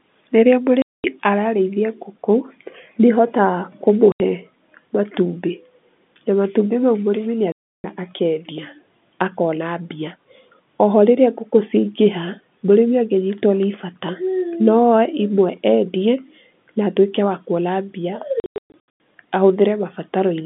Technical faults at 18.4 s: packet loss filled with silence

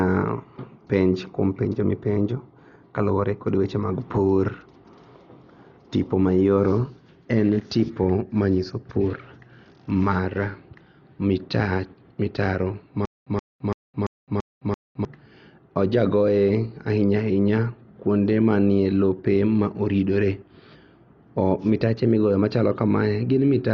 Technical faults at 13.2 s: Dolby Digital compression; stutter with silent gaps

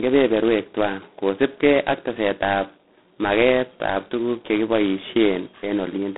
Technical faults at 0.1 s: G.726 ADPCM

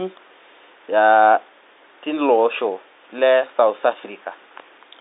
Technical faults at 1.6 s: none

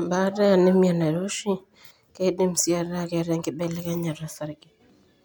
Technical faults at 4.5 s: none

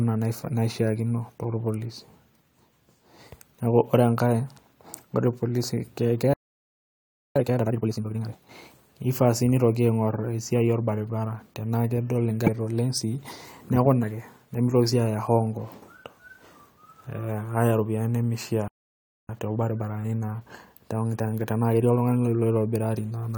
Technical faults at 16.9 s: none

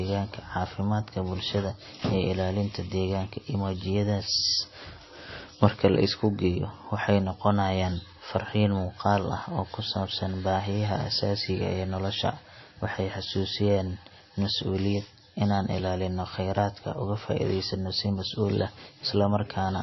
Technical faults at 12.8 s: MP3 compression

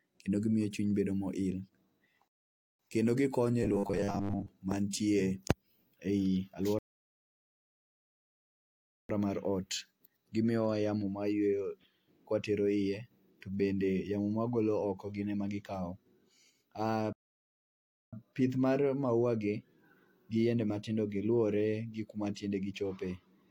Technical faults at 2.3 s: rebuffering stall

